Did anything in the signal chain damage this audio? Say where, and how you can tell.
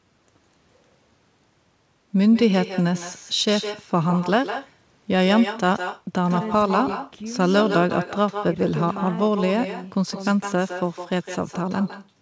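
Yes. The damage happens at the call-processing stage: an echo with no canceller. From start to finish, every phrase of speech is followed roughly 150 ms later by a second copy about 10 dB quieter. That copy is thinner than the original. The far end is playing the call through a loudspeaker, and its microphone picks that sound back up. Nothing at that end subtracts it, so it returns over the network. The audio also has nothing above 8 kHz, which fits a wideband call codec.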